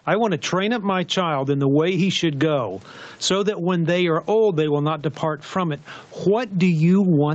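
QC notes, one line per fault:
Throughout, gain pumping: the level swings by around 15 dB, squashing loud and soft passages together. The likely cause is input gain set far too high, with a fast limiter pulling down each peak.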